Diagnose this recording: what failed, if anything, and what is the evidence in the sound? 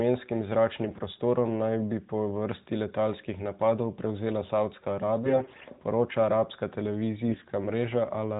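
Hoarse, gargly scratchiness at 0.88–1.03, 5.24–5.66 and 7.28–7.46 s: AMR bit errors on the network link corrupting weakly protected codec bits, while pitch and level hold.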